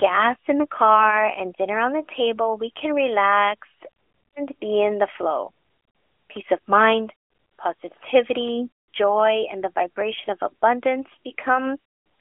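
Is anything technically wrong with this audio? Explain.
No, nothing is technically wrong with this audio.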